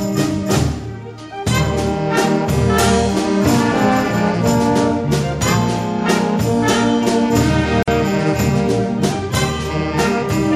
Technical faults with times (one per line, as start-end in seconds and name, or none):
7.83-7.88 gap at a join of encoded pieces